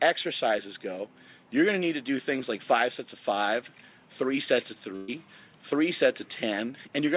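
Audio carried over a narrowband call link, with nothing above about 4 kHz, which fits a 64 kbps G.711 mu-law codec. From 4.96 to 5.10 s the sound stalls: the last moment is stretched into a held tone or hiss that fades for about 120 ms, then the audio jumps ahead. That is a burst of packet loss. Consecutive packets never arrived in time, so the receiver extended and faded the previous audio to cover the hole, and about 120 ms of the original is missing.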